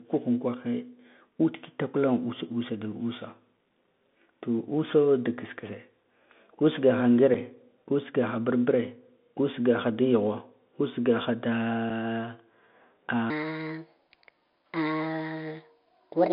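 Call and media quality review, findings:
Bluetooth CVSD headset codec, throughout: band limited to about 150 Hz–3.6 kHz, scratchy sibilants, granular hiss. Consistent with a 64 kbit/s one-bit delta link whose step size cannot track loud high content.

Unconcealed Bluetooth headset packet loss at 7.34 s and 11.9 s: abrupt 7.5 ms holes, which fits roughly two lost headset packets replaced by silence and no concealment.

Section at the wrong speed, 13.3 s to end: speed and pitch up together, 1.36x, about five semitones higher and hurried. Likely cause is playback or editing against a mismatched clock rate.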